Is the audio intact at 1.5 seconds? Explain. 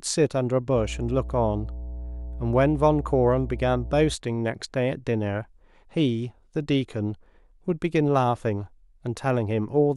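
No. Mains hum runs from about 0.73 s to 4.16 s, so 1.5 s falls inside it. Power-line current leaks into the signal through a ground loop or a nearby transformer, laying a steady 60 Hz tone under the speech, fairly loud and not far below it. On a spectrogram it shows as an unbroken horizontal line at 60 Hz across that span. On the waveform, a regular low-frequency ripple thickens the trace, visible even in pauses.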